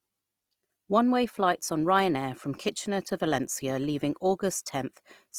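Opus compression, likely, runs through the whole clip: the speech sounds grainy and rough, with a noisy sheen where detail should be, as starved bands are filled with folded or noise content, which fits the music mode at about 24 kbps, with nothing above 20.4 kHz.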